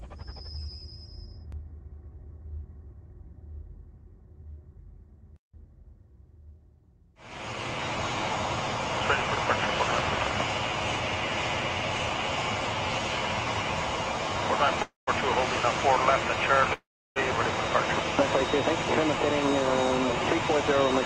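Two call audio freezes interrupt the audio, at 14.82–15.09 s and 16.73–17.18 s. Each time the sound trails off into silence, then resumes where it stopped. This is likely a jitter buffer running dry while packets were delayed.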